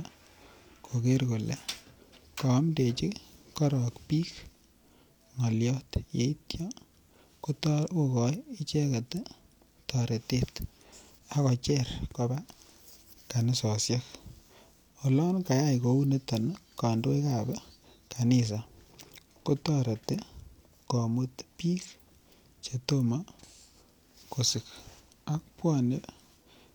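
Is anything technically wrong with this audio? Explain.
No, nothing technical stands out here; it all sounds just as it should.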